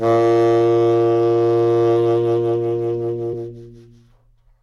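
At 3.33 s the music skips ahead by roughly one frame, about 20 ms of audio, where compressed frames were skipped.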